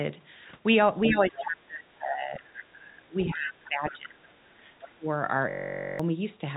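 Around 1.04 to 1.42 s you get the first bit of the other side's voice leaking through, sitting roughly 10 dB under the speech. It's a second voice tucked behind the talker, most likely residual echo from a loudspeaker that the echo canceller didn't fully remove. It comes back more quietly, about 20 dB down, as brief scraps at 2.42 to 2.62 s, 3.64 to 3.93 s and 4.82 to 4.92 s.

Overlapping with those, the talker's own speech gets pushed down, which is the speech suppressed in double talk. From 1.1 to 2.42 s it dips by as much as roughly 25 dB. From 2.73 to 4.42 s it drops by up to about 20 dB. At 4.95 to 5.07 s there's a short, sharp hole of around 30 dB. The voice sounds like it's ducking while the far end is active, likely because the canceller couldn't separate the talker from the echo and turned both down.

Then from 5.50 to 6.00 s there's a system hang loop. A 21.33 ms slice repeats about two dozen times, which fits a 1024-sample buffer, so you hear a steady buzz at around 46.9 Hz in place of half a second of speech. 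That's what you get when the machine stalls while the audio hardware keeps cycling the same buffer.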